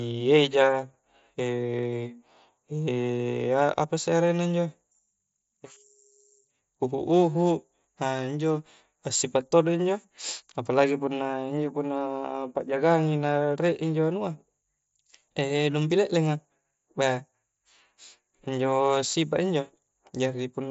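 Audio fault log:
No faults heard.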